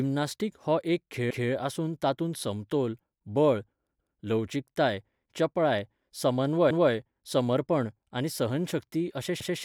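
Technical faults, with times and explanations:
1.30–1.51 s, 6.70–6.91 s and 9.40–9.61 s, overlapping chunks: after "हो एक", just before "समर्पण आनी सहनशक्ती", and right after it, a 200 ms stretch replays because each 2.5 s chunk starts before the previous one ends. The result is a stutter where audio repeats, not a gap where it drops out.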